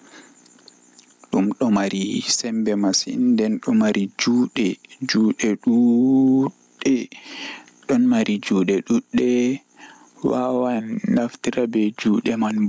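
From start to finish the gain swings by around 15 dB, leaving loud and quiet syllables squashed to a similar level. This is gain pumping, most likely from input gain set far too high and a fast limiter or compressor hauling it down on every loud sound, then releasing in the gaps. The call microphone processing's band limit, with nothing above 8 kHz, is normal.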